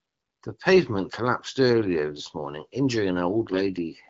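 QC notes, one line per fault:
3.52–3.56 s, AMR bit errors: a brief hoarse, gargly scratch cuts into the speech while pitch and level hold roughly steady. The span fits two corrupted 20 ms frames. Around 7 percent of the weakly protected bits arrived flipped, but the checksum on the critical bits still passed, so the decoder used the frames. Misplaced excitation pulses and wrong fine pitch, gain and spectral values roughen the voice. The surrounding wideband AMR-WB coding sounds clear, with only light codec texture.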